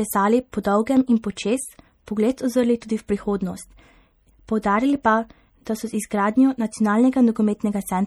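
From start to finish the speech sounds watery and swirling, with the top end dulled and s sounds turning into metallic chirps, while consonant attacks come across smeared rather than crisp. This is likely MP3 compression at a low bitrate, the damage suggesting something near 48 kbps. Starved of bits, the encoder cuts the treble at a fixed point and drops quieter frequency lines, which flicker on and off between frames and produce that unstable, bubbling texture.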